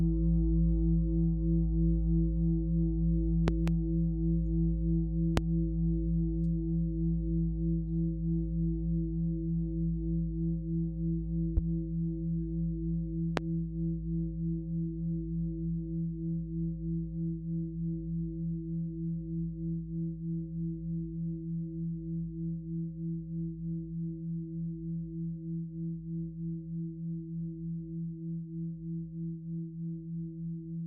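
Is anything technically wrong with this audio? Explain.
Yes, there are loud pops: a double one at 3.48–3.70 s, then single ones at 5.37–5.40 s, 11.57–11.60 s and 13.37–13.40 s. Each is likely a voltage spike from a switch, plug or static, jumping well above the sound, which carries on underneath.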